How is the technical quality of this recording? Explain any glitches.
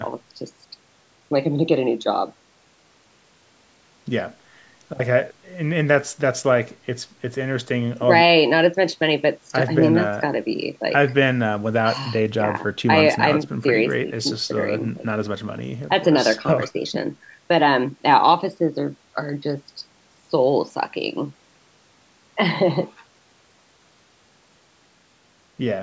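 No glitches are audible: the speech has passed through a call's microphone processing, which removes the lowest bass and leaves nothing above 8 kHz, and that is normal for this path.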